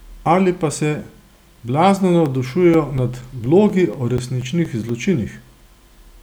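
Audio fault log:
2.26 to 5.37 s, CD scratch ticks: fourteen short ticks and micro-dropouts in the speech, evenly spaced at roughly four to five per second, the longest around 10 ms. A blemish on the disc corrupted more data than error correction could rebuild once per revolution, so the player patched or muted those samples. Unlike the random crackle of vinyl, these ticks keep a strict rotational rhythm, though their strength is uneven across the run.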